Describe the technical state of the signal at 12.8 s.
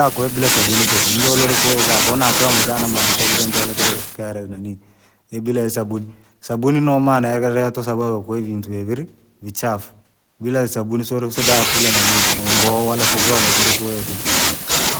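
At 12.8 s the speech signal is intact, with no dropout, clipping, distortion or other technical fault.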